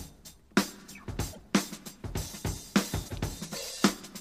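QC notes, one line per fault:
1.32–1.38 s and 3.07–3.13 s, broken MP3 bit reservoir: the audio skips ahead, then about 56 ms, roughly two 26.1 ms frames, comes out as a chirp, noise burst or short hole. Frames after a cut likely read another frame's bytes as their own. A plain dropout would leave clean silence instead.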